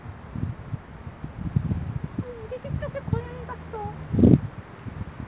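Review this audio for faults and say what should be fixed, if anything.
Nothing here needs fixing. The sound has passed through a call path and stops at about 4 kHz with a narrowband character, which fits a G.711 A-law codec at 64 kbps.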